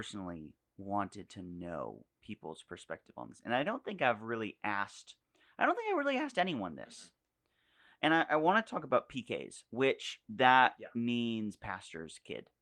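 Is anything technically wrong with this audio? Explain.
No, nothing in this speech recording points to a technical fault. The Opus voice compression is audible only as light coding texture, with the full band kept, which fits its hybrid mode at around 24 kbps.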